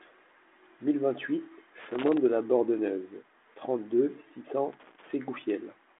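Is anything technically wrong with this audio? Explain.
Yes, there are two bursts of loose connector crackle in this speech. The first runs from about 1.80 to 2.18 s, ending just before "de la", and the second from 4.73 to 5.13 s, right after "six cents". A worn or dirty contact is making and breaking as something shifts, chopping the signal in and out, with any DC on the line adding pops. You hear it as an irregular, scratchy crackle lasting about 0.4 s each time. It sits on top of a 32 kbit/s telephone-band path that stops around 3.8 kHz.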